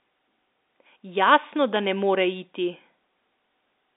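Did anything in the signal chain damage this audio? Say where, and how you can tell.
Yes, a loud pop at 1.76 to 1.78 s, a single sharp click rising a few dB above the speech, which carries on underneath. It points to the analogue wiring stage, likely a voltage spike from a plug, switch or static discharge, passing through the telephone-band line into the signal.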